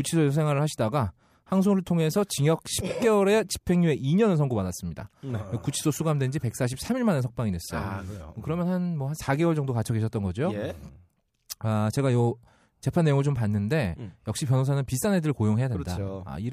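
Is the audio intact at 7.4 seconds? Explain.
Yes, at 7.4 seconds the speech plays through intact, with no dropout, click, distortion or other fault at that point.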